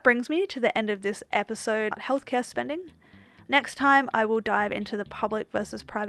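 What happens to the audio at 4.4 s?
At 4.4 s the speech is inside a jitter buffer speed-up running from 3.49 to 5.57 s. The receiver trims pitch-period-sized slices to drain excess buffered audio, about a tenth of a second in all, so delivery sounds hurried at 105% while pitch stays unchanged, unlike a resampling speed error.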